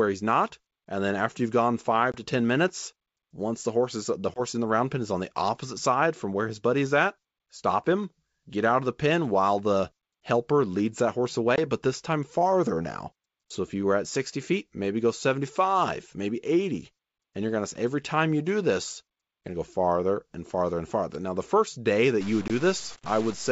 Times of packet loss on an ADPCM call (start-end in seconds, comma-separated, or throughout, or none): 2.12-2.17, 4.34-4.41, 11.56-11.59, 22.48-22.51